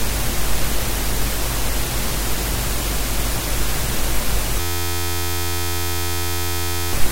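From 4.60 s to 6.93 s the audio locks into a system hang loop: an 11.61 ms fragment repeats about 200 times at 86.1 Hz, producing a steady buzz. That loop length fits a 512-sample buffer. The host stalled while the hardware replayed its ring buffer, losing roughly two seconds of sound.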